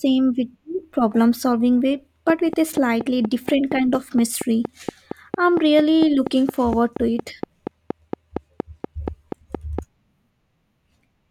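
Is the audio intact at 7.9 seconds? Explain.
No. At 7.9 seconds the speech sits inside a train of clicks running from 2.30 to 9.80 s. The likely cause is electrical interference from nearby equipment or a faulty connection or power supply injecting a short pulse into the signal path at a steady rate. The result is a regular ticking at 4.27 clicks per second, around thirty in all, each much the same shape and peaking roughly ten decibels above the speech, audible over the sound and in the pauses.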